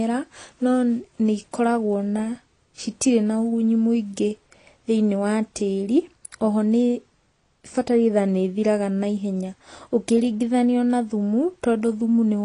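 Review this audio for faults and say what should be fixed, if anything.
The whole clip stops dead above 10.2 kHz and sounds dull, with a warbling, fizzy smear on sibilants, likely from AAC compression at a bitrate that fits about 32 kbps. Unlike a simple low-pass filter, it leaves patchy spectral holes and swirling artefacts. Re-encode from the original at a higher bitrate.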